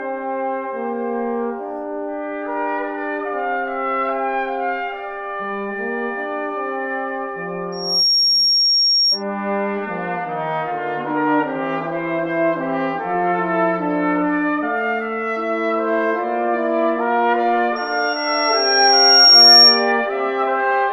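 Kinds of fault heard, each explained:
Loudspeaker feedback squeal: a microphone picks up its own loudspeaker, and one tone runs away. Here a 5.6 kHz squeal rises twice. The second is louder and slower.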